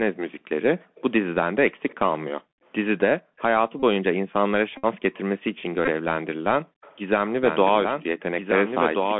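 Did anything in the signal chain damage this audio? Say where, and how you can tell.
Yes, in several places, and the codec stage shows throughout. The whole speech clip has gone through the Bluetooth CVSD headset codec, squeezed into a 200 Hz to 3.4 kHz band. That one-bit, adaptive-step scheme can't keep up with sharp loud detail, so sibilants come out scratchy and there's a grainy hiss sitting under the talker the entire time. The damage is plainly audible.

The call-processing stage also shows background gated by the echo canceller. The room tone drops out by about 40 dB at 0.83–0.95 s, 2.41–3.37 s and 6.62–6.81 s, then comes back. That's the canceller slamming the mic down while it thought far-end audio was playing, and releasing once it let go.

Right after the first and last of those dips, and elsewhere, you get an echo leak, likely from the far end running a loudspeaker with a canceller that didn't quite clean up. 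A faint copy of the speech, around 30 dB down, trails by 182 ms at 0.95–1.97 s and 3.37–3.42 s, and by 197 ms at 5.14–5.61 s and 6.81–6.97 s. It's there if you listen under the main voice.

Over the radio link there's the Bluetooth headset packet repeated problem at 2.55–2.61 s, 3.80–3.84 s, 4.77–4.85 s and 5.85–5.90 s. Each spot is a short buzz near 267 Hz lasting roughly 19 to 60 ms, which fits runs of lost 3.75 ms packets. When packets go missing, the chip just replays the last good one until real data shows up again, and that fixed repeat rate is what makes the buzz.

Finally, from 7.43 s to the end there's a doubled audio track, likely from the same signal being captured twice, once through a slower path. A full-band copy, only a few dB quieter, runs about a second and a half behind the original. It has no reverb or room colour, so it's not an acoustic echo. It's a clean second copy that starts abruptly and runs to the end.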